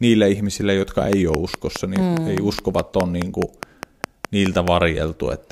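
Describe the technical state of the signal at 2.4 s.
At 2.4 s a train of clicks is running, from 1.13 to 4.69 s after "ihmisille jotka": about twenty similar pops at a steady 4.8 per second, roughly 15 dB over the speech, likely interference pulses. Their even spacing sets them apart from random crackle.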